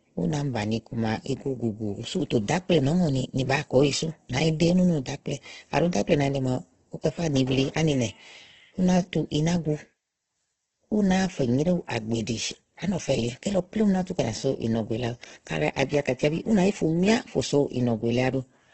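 From start to end, the speech carries heavy damage that likely comes from Opus compression. Nothing sounds above about 8.2 kHz, so the top is cut off. Consonants and vowels turn rough, grainy and noisy rather than swirly. The encoder kept each band's energy but had too few bits for detail, so it filled bands with noise or copies of lower ones. The roughness points to its music mode at a very low bitrate, near 12 kbps.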